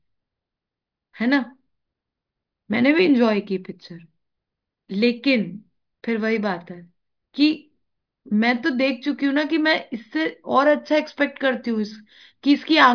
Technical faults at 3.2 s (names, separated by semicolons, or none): none